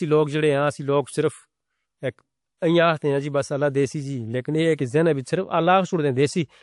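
Throughout the speech, two layers of coding artefacts are heard together, likely from transcoding between lossy codecs: a low-rate MP3 stage, then WMA re-encoding its damage. A spectrogram shows a hard ceiling with nothing above 11.2 kHz.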